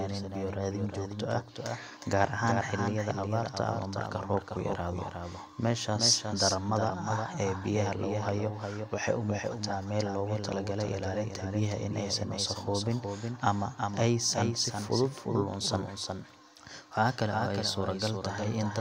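From start to finish, every phrase of the speech is heard a second time: a doubled audio track, with one copy trailing the original by roughly 0.4 seconds and sitting a few decibels below it. The likely cause is the same signal reaching the mix twice, once through a slower path. Unlike room echo or reverb, the repeat is a single full-band copy with no decay, no tail and no room colour.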